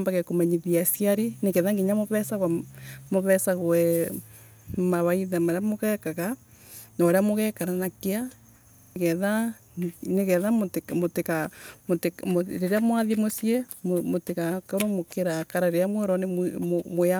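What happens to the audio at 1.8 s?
Nothing goes wrong at 1.8 s; the speech carries on intact there, with no dropout, click, distortion or other fault at that moment.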